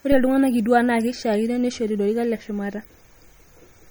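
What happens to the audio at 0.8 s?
At 0.8 s the speech carries audible MP3 compression damage, present across the whole clip rather than starting there. Weak frequency lines drop in and out between frames, giving a watery, swirly texture and smeared consonants, likely from encoding at a low bitrate around 48 kbps.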